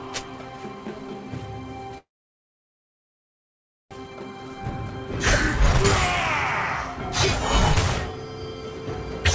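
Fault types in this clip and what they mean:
Call audio freeze: From 1.98 s to 3.93 s the sound stalls. There's a very short tail of the last sound, then about 1.86 s of silence before it picks up exactly where it left off. Nothing is skipped; the whole thing just runs about 1.93 s later afterward. That's most likely packets stalling in transit and the jitter buffer running dry. The band-limiting from the call codec, nothing above 8 kHz, which fits G.722, is there before and after the pause.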